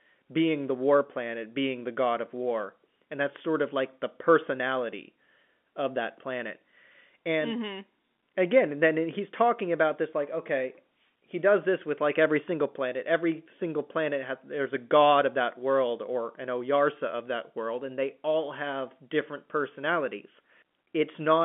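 No technical faults can be heard in this speech.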